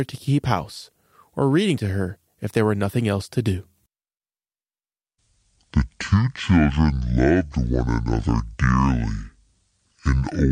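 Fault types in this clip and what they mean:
Section at the wrong speed: from 5.06 s onward the speech runs at 0.585 times normal speed, roughly ten semitones deeper and slower, likely from a mismatched playback clock.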